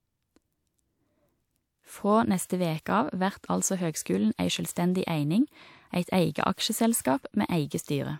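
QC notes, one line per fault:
2.45 s, 4.02 s (just after "vert altså") and 4.72 s, pre-echo: a brief hiss of about 40 to 46 ms arrives before each sharp onset. The codec's block-wide quantisation noise leaks ahead of the attack, unlike a click or dropout, which occur at or after the event.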